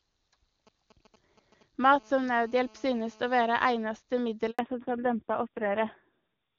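From 0.67 to 1.86 s, GSM signalling bursts cut in. A 2G phone nearby is sending short groups of radio pulses, as it does while setting up a call or a text. The audio circuit rectifies those pulses into sound. The result is a galloping dit-dit-dit of brief buzzes. The buzz pitch is 217 Hz, the phone's burst rate. It sits well down, roughly 30 dB below the speech.

At 1.92 s the pattern turns into a continuous GSM phone buzz, lasting until 3.62 s. The phone is now in a call and transmitting steadily at 217 bursts per second. The rectified pulses become a hard, raspy tone at 217 Hz. It is rich in harmonics and has nothing to do with the speech. It stays at about 30 dB below the speech throughout.

From 4.51 to 4.59 s there is a handover gap of 80 ms. The call is being passed from one network to another. No speech frames arrive during the switch. The sound fades within a few tens of milliseconds and drops to silence. 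Whatever was said in that moment is lost. The audio resumes only when the new link comes up.

From 4.59 s to the end, there is a fallback to narrowband. Before the gap, the speech had the clarity of HD Voice. The high band sounds consistent with AMR-WB near its top rate of 23.85 kbit/s, with little codec damage. After the switch, nothing above 4 kHz remains. The speech turns dull and muffled. It also gains a rough, gritty texture. That points to a low-rate narrowband AMR mode, around 5.9 kbit/s.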